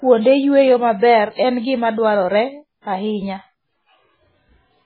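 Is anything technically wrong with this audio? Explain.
Yes. Heavy MP3 compression runs through the whole speech clip and is the likely cause of its dull, watery character. When the encoder runs short of bits, it discards the treble at a fixed cut-off and zeroes weak frequency lines that then flicker on and off from frame to frame. Here nothing survives above 4.5 kHz, which fits a very low bitrate of around 16 kbps. The audio sounds muffled and swirly, with chirpy s sounds and smeared consonant attacks.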